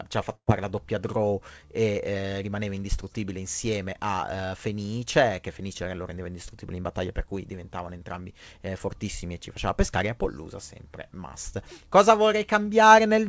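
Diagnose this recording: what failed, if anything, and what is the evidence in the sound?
A burst of packet loss on the network leg left the receiver with a gap of roughly 120 ms from 0.35 to 0.50 s. The jitter buffer's concealment extended the last sound for about 119 ms, fading it so that the tail of the gap goes quiet, with about 70 ms effectively silent. Playback then resumes later in the stream, and the intervening audio is lost. The call path's band limit at 8 kHz, which fits G.722, is present throughout.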